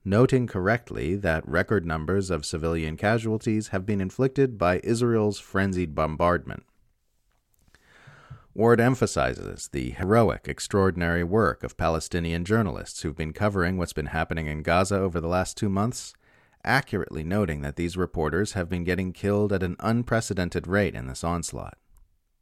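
A speech recording with two abrupt jumps where the sound skips forward without any gap: at 10.03 s, between "emphasizes the" and "extraordinary work of", roughly 70 ms vanishes, and at 20.09 s, after "getting killed at an", a tiny slice of about 20 ms disappears. Both are likely dropped buffers (overrun).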